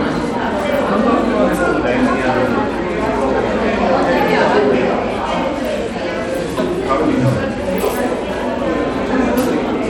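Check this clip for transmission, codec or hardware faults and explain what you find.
One codec fault runs through the whole clip. Bluetooth SBC compression is the likely cause. The treble flickers and drops out, with gritty noise and aliasing, consistent with a starved bit budget near 96 kbps.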